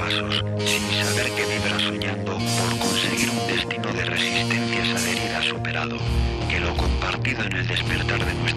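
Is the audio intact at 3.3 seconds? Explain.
No, 3.3 seconds sits inside a train of clicks running from about 2.86 to 3.92 s. Roughly fifteen sharp pops arrive at an uneven pace, about 13.3 per second, peaking around 10 dB above the sound. That's likely interference or a faulty connection injecting pulses.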